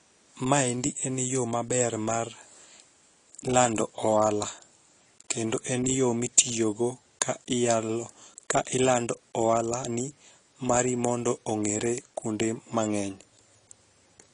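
From start to end, the speech sounds dull and smeared, with a warbling, fizzy texture on sibilants and sustained sounds. This is likely AAC compression at a low bitrate, which fits about 32 kbps. A spectrogram shows nothing above 10.2 kHz.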